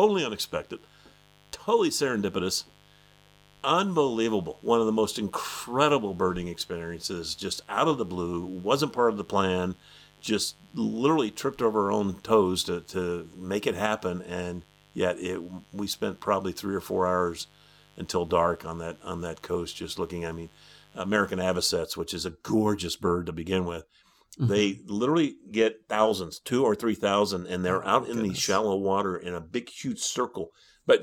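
From the start to 21.72 s, a mains buzz sits under the speech: a steady, raspy tone built on 50 Hz harmonics extending into the kilohertz range, roughly 30 dB below the signal. Sharp switching spikes, twice per mains cycle, leaked into the audio path, then stopped.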